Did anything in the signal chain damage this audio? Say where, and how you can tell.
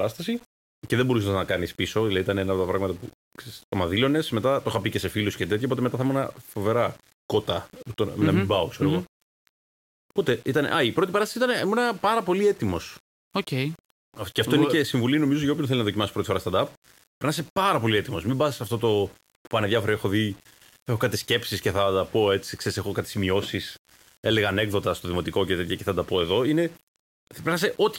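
Yes, the speech has a grainy, fizzy distortion from start to finish that rides on the signal, with the quietest tails sputtering or dropping out. That's low bit depth without dither, likely from a sample-format conversion rounding to about 7 bits with the error only about 30 dB down.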